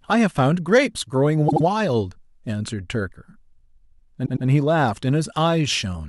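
At 1.48 s and again at 4.25 s the speech stutters with repeated frames. A block of compressed audio was played three times over, 78 ms long the first time (fitting three frames) and 105 ms the second, adding 157 and 209 ms. Unlike an echo, each repeat is an identical copy at full level.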